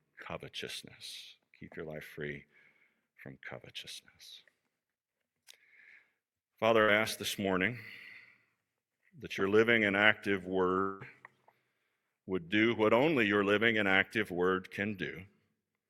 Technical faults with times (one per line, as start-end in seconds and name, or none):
6.81-6.92 burst of packet loss
10.81-11.02 long network dropout